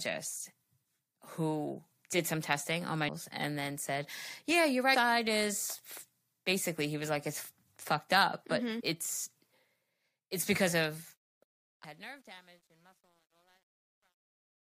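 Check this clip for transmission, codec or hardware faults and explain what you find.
Two faults are present: damaged data in the compressed stream, and truncation distortion on the closing fade.

Damaged data in a compressed stream occurs at 3.08 s, between "some testing on my" and "and then said", at 4.94–4.96 s, at 8.79–8.81 s and at 11.83 s. Corrupted bytes make the decoder misread frames and hunt for the next header. Each event is a brief chirp or blip.

Truncation distortion on a fade starts at 10.80 s, just after "it's because", and runs to the end. The gain stage is keeping only about 10 bits with no dither. The smooth fade-out turns gritty toward its quiet end, and from 11.69 s onward it is at its worst, with the waveform reduced to a few square steps.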